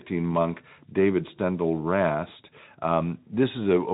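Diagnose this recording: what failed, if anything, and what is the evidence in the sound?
Nothing in this speech recording points to a failure at any stage. The Speex codec in the path leaves only a light coding texture, and the band stops near 3.8 kHz, which fits a setting of around 15 kbps.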